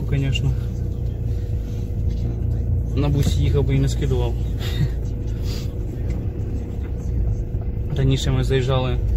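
No technical faults can be heard anywhere in this audio.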